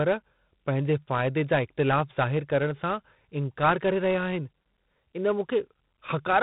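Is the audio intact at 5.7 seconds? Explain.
No. At 5.7 seconds the speech is still under the 4-bit ADPCM compression that runs through the whole clip. Each sample is coded as a coarse 4-bit step from a predicted value, and the step size adapts too slowly for fast changes. The damage sounds heavy, consistent with a 32 kbps stream: gritty hiss riding on every loud syllable, roughness on sharp onsets, and a dull tone with nothing above 3.9 kHz.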